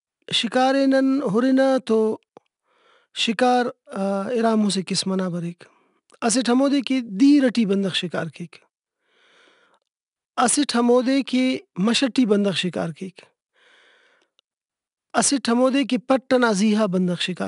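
Right through the speech you can hear 4-bit ADPCM compression: a gritty hiss that tracks the level of every loud stretch, since each sample is only a coarse step off a prediction. Nothing reaches above 10.6 kHz, which points to roughly 89 kbps.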